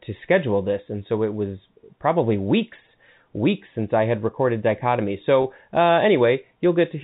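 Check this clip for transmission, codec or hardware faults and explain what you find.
One fault: a brief glitch just after "I had recorded dichotomy". From 5.42 to 5.44 s the sound holds for 20 ms with a slightly buzzy, frozen quality. This is packet loss with pitch repetition. The missing audio, which fits a single lost packet, was bridged by repeating the last pitch period, so the gap comes across as a momentary held tone rather than a dropout. Underneath, the G.711 telephone coding limits the band to 4 kHz and adds at most faint quantisation noise.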